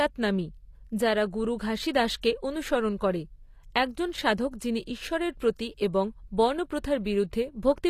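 Throughout, likely HE-AAC compression, fitting roughly 24 kbps, rebuilds the speech's treble from copied lower bands, leaving s sounds gritty and metallic, with nothing above 14.9 kHz.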